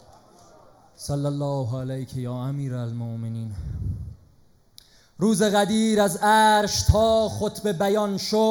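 Channel delay (comb filtering) runs throughout. One channel lags by roughly a fifth of a millisecond, so summing cancels near 3 kHz, leaving the sound hollow and phasey.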